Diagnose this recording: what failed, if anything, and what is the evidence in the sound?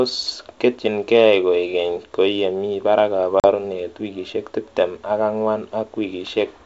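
Packet loss on an ADPCM call at 3.40 to 3.50 s, a network-stage fault. The speech drops into a hard-edged silent hole of about 40 ms, consistent with a few consecutive packets going missing. Because G.722 at 64 kbit/s codes each band by ADPCM, the receiver's adaptive predictor and step size lose track of the sender's during the gap, so the speech comes back slightly distorted before the decoder settles by 3.50 s.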